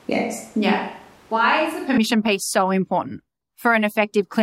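A switch to a distant microphone is already under way when the speech begins and runs to 1.97 s, ending just before "piece so important". Until then the voice sounds roomy and hollow, with thinned bass and room noise roughly 30 dB below the speech, though the level stays about the same. This is likely because the close microphone's signal was missing and a farther pickup stood in. The return to the close, fuller sound at 1.97 s is abrupt.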